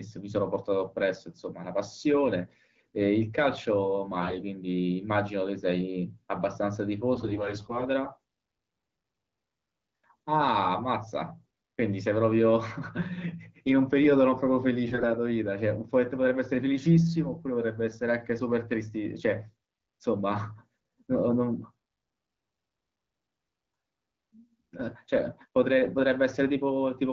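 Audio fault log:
4.20–4.42 s, 7.14–7.84 s, 14.84–15.12 s: AMR bit errors. About a tenth of the weakly protected bits arrive flipped, somewhat more in the last burst, so excitation pulses and fine pitch, gain and spectral values decode wrong. Pitch and level hold, but the sound turns hoarse, scratchy and gargly.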